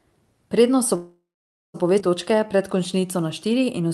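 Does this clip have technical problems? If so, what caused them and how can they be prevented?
Yes. There are three faults in this speech clip.

From 0.95 to 1.76 s there is a call audio freeze. The last sound is stretched into a fading buzz and then about 0.52 s of silence. The speech resumes where it stopped, so nothing is lost, but 787 ms of delay is added. The likely cause is packets held up in transit, which drained the jitter buffer. A steadier network path with less congestion would prevent it.

At 2.0 to 2.03 s there is a skip ahead. Playback jumps forward with almost no gap. About half a second of speech is gone, and the two sides are joined nearly directly. The audio was dropped, either in transit or by the jitter buffer when it overflowed. A jitter buffer that reduces delay gradually, instead of dropping large chunks, would avoid this.

From 2.31 to 3.90 s there is a jitter buffer slow-down. 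The speech runs at 91% speed with unchanged pitch, and sounds are drawn out. About 151 ms is added by repeating pitch periods to rebuild a reserve. Keeping arrival timing stable would prevent the buffer from running low.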